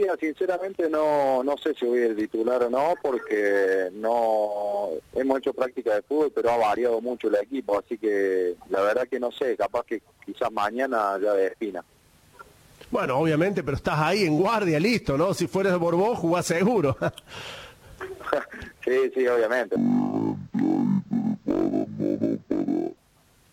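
Stereo read as mono from 19.76 to 22.97 s: interleaved left and right samples are played as one channel, so the sound runs at half speed, an octave lower.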